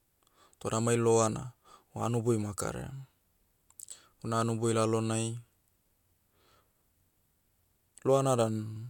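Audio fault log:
There is no fault in this speech clip.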